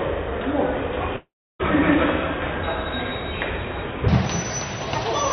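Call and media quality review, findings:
Long network dropout, 1.16–1.61 s: short decaying buzz, then about 0.33 s near-silence. Waveform flattens, spectrogram goes blank. Likely packet loss underrunning the jitter buffer.

Section at the wrong speed, 4.08 s to end: 1.59× fast, pitch up about seven semitones. Spectrogram energy shifts upward, events compressed. Likely wrong playback clock.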